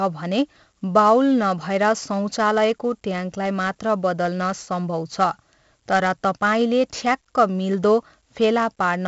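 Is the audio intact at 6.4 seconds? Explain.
No, 6.4 s sits inside 4-bit ADPCM compression that runs the whole clip: coarse prediction steps leave gritty hiss riding the speech, and nothing above about 7.7 kHz.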